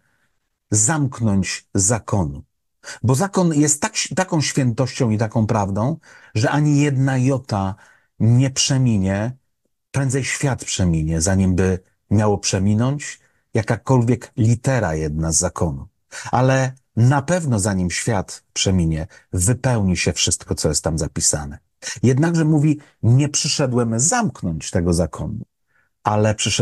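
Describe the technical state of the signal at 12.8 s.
At 12.8 s the speech signal is intact, with no dropout, distortion, glitch or other audible fault.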